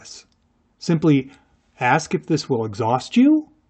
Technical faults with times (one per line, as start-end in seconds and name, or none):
none